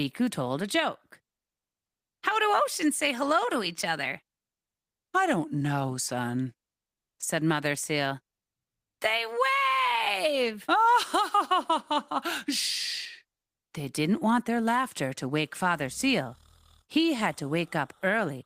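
Nothing in the speech stood out as a technical problem on listening.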